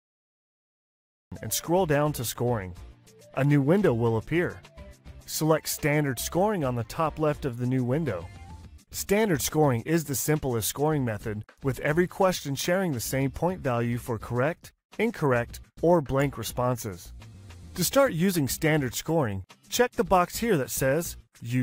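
The clip opens with a cut-off start: digital silence until 1.32 s, then sound appears already mid-event, because capture began late. There is no natural attack or fade-in. On a waveform, a flat line jumps straight to the ongoing signal; a spectrogram shows an abrupt vertical edge.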